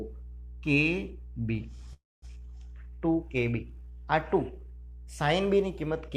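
Mains hum runs from start to finish: power-line interference, from a ground loop or nearby transformer, has leaked into the signal path. It sits as a steady 60 Hz low tone with some low harmonics, roughly 15 dB below the wanted sound, never letting up.

A call audio freeze follows from 1.93 to 2.25 s, likely caused by packets stalling in transit until the jitter buffer ran dry. The receiver stretches the last sound into a brief fading buzz or hiss, then about 220 ms of silence, before playback resumes intact, now running about 289 ms late.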